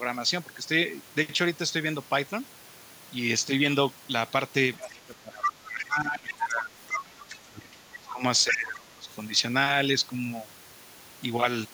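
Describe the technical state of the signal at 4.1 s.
At 4.1 s the speech signal is intact, with no audible dropout, clipping, distortion or other fault at that moment.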